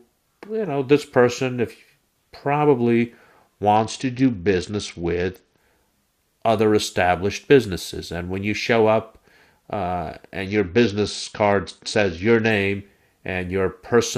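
Between 3.76 and 5.58 s, and again from 10.46 to 12.50 s, the speech dulls and turns gritty: a Bluetooth SBC bit pool drop, consistent with the pool falling from about 28 to 8 (roughly 72 kbps). Starved upper sub-bands vanish, so the spectrogram shows the treble cut off abruptly, with grainy noise across the remaining bands.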